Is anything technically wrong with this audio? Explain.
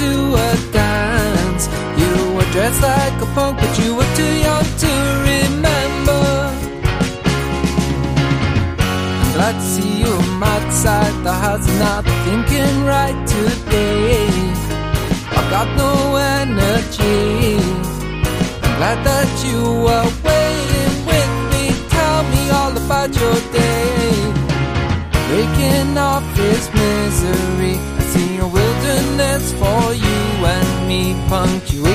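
No, nothing here sounds technically wrong; there's no glitch, dropout or distortion to point to anywhere in it.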